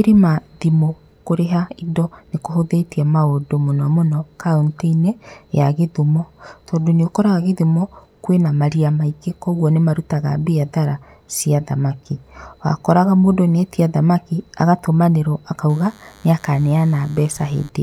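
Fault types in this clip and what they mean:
DECT cordless phone buzz: a nearby DECT handset or base fires a radio burst every 10 ms, and the audio circuitry rectifies it into a thin, steady 100 Hz buzz full of harmonics, sitting roughly 30 dB under the speech from about 15.7 to 17.7 s.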